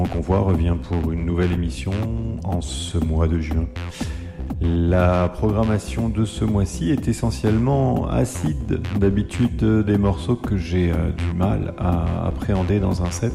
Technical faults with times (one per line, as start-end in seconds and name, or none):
none